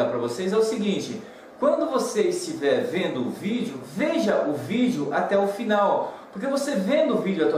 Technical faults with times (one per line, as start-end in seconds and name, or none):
none